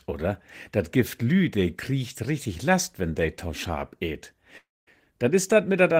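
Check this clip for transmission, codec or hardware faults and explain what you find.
One fault is present. From 4.57 s to 4.89 s a long network dropout occurs. The sound smears into a decaying buzz, then about 0.22 s of silence, and resumes with about 0.3 s missing. The likely cause is lost packets, with the receiver briefly extending the last sound.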